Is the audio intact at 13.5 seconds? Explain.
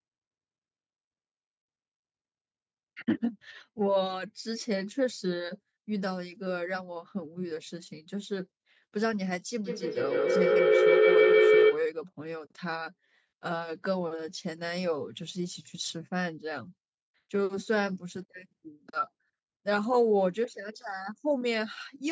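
Yes, the speech at 13.5 seconds is intact, with only the ordinary call microphone processing audible there as the missing deepest bass and a top end that stops at about 8 kHz.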